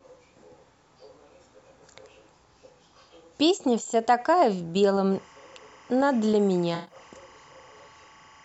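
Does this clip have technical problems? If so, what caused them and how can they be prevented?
Yes. From 5.12 s to the end there's timecode bleed, a chirpy warble switching around 1 and 2 kHz, well below the speech, from 25 fps linear timecode leaking in. Keep timecode on separate, shielded cables away from audio.

Between 6.75 and 6.95 s there's AAC frame loss with concealment: a smeared, phasey patch where the decoder guessed from earlier spectrum, which fits about six lost frames. Use a more reliable transport or add error protection.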